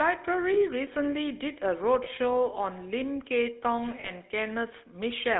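A speech clip coded with the GSM full-rate codec from start to finish. The damage is plainly audible. The voice has the buzzy, gravelly roughness of this codec. It models the vocal tract and excites it with a sparse pulse train, so fine detail in the excitation is thrown away. The band runs from about 250 Hz to 3.7 kHz, so the sound is thin and boxy. The coarseness fits a 13 kbps full-rate stream. There are also lost GSM frames at 0.54 to 0.58 s, 2.04 to 2.08 s, and 4.00 to 4.11 s. At each one the decoder reuses the last good frame's settings. This gives a short rough, metallic ring instead of a gap. The first two are brief and fit a single 20 ms frame. The third lasts longer and fits two consecutive frames, about 40 ms. That is too short to fade fully to silence, so it sounds like a smeared, ringing blip.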